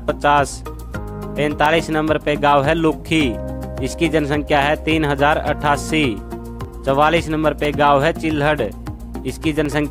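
Regular ticks recur once per second from 0.66 s to 9.66 s, each a brief gap of about a millisecond dropped to silence: periodic USB or driver dropouts.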